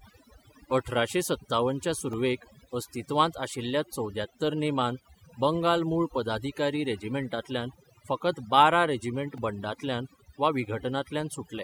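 Overdone noise removal runs throughout: the speech sits over a near-silent, twinkling background, and the spectrogram shows dark gaps with isolated bright specks. A repeated buffer hits at 2.13 s (one extra play) and 9.38 s (four), heard as a click or brief buzz. The short identical segments fit a 64-sample buffer and appear as hard waveform discontinuities.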